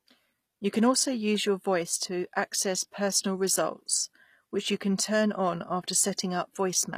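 From start to finish, the speech has a gritty, metallic edge on its s sounds, with a lisping quality, while the treble still extends high. The likely cause is HE-AAC compression at a low bitrate, consistent with about 24 kbps: the upper band is rebuilt by copying lower bands upward, so harmonics fail to line up across the crossover. On a spectrogram, the treble looks like smeared, repeated copies of the lower spectrum, and it stops cleanly at 15 kHz.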